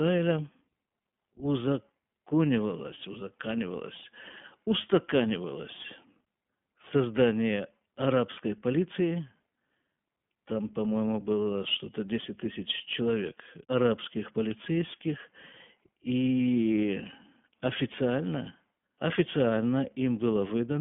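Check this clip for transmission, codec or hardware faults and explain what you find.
One fault runs through the whole recording: iLBC codec coding. The speech is band-limited throughout, sitting roughly in a 150 Hz to 3.4 kHz telephone band with nothing above 3.6 kHz, and it carries a plainly audible rough, synthetic edge. iLBC codes each short frame's excitation on its own, without leaning on the previous frame. That independence, together with the narrow band, produces this grainy quality. The texture fits 20 ms frames at around 15.2 kbps.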